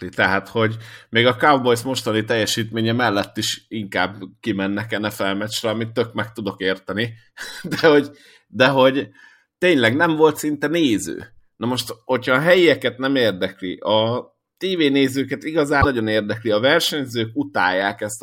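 Speech clip with damaged data in a compressed stream: corrupted frames throw the decoder out of sync, producing brief glitches at 7.78–7.81, 10.35–10.37 and 15.78–15.86 seconds.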